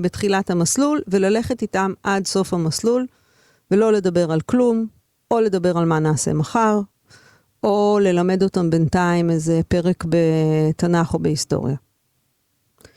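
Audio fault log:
No technical faults detected.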